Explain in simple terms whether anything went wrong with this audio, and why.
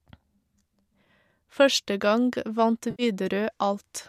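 Something did go wrong, briefly. From 2.91 to 3.03 s there is a short smeared, noisy patch. This is AAC frame loss with concealment. The audio was likely sent with low-delay AAC, the kind used in video calls, which packs sound into tiny chunks called frames. About 80 ms of those frames never arrived. The decoder guessed the missing part by reusing the last good sound. That guess is what you hear as the blurry patch.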